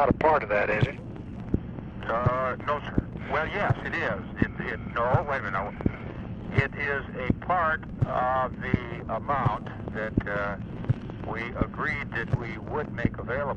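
No dropouts, distortion, level jumps or timing errors are audible anywhere in the clip.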